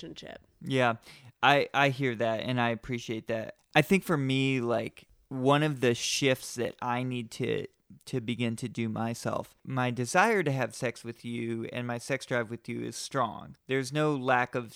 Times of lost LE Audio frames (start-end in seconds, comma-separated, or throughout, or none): none